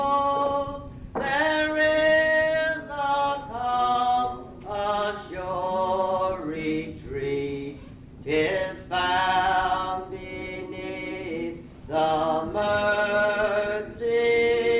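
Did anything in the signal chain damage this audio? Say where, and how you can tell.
No, nothing along the signal chain audibly damages this audio, and the signal stays continuous and intact throughout.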